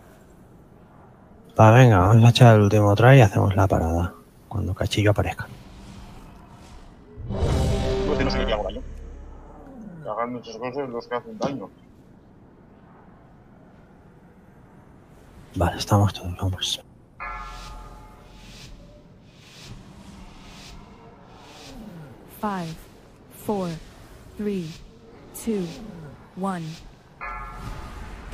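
From 6.17 s to 8.83 s the audio turns into a time-stretched section, running at about 1.95 times normal pace while its pitch holds steady. It sounds rushed, likely because software squeezed the passage by discarding short slices to keep pitch.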